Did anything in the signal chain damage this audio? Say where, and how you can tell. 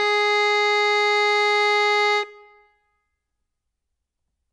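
Yes, at the codec stage: the music sounds watery throughout, with nothing above 10.5 kHz, likely MP3 compression starved of bits, which fits roughly 40 kbps.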